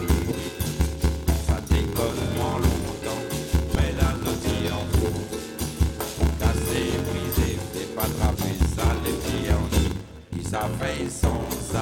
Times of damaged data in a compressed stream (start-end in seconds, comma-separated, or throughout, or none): 3.74, 8.34, 10.31